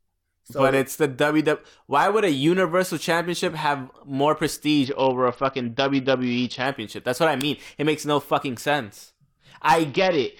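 Right after "have more", from 4.84 to 6.66 s and again from 9.87 s to the end, there's a Bluetooth SBC bit pool drop: the link starves the top bands, so the sound goes dull and gritty, which fits a fall to roughly 61 kbps.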